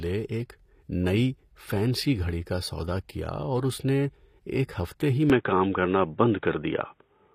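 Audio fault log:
Throughout: HE-AAC compression, likely the cause of the plainly audible codec damage across the speech. The lower spectrum is coded directly, while the treble is rebuilt by copying lower bands upward and shaping them with a coarse envelope, so its harmonics no longer match the original across the crossover and s sounds come out gritty or metallic. Nothing is present above 15.5 kHz, and the sound fits HE-AAC v2 at a low bitrate around 24 kbps.
5.30 to 7.35 s: input switched to a poorer device, the likely explanation for the abrupt change right after "نے ایک ہفتے ہی". From that point to the end, the band stops at 3.8 kHz, so the speech turns dull and boxy. The overall level shifts by roughly 5 dB, and a new background noise appears about 50 dB below the signal. There is no gap at the switch, which fits the system moving straight to a narrower-band microphone or a headset's call profile.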